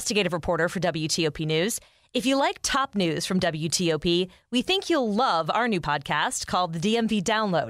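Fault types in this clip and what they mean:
No faults can be heard anywhere in this recording.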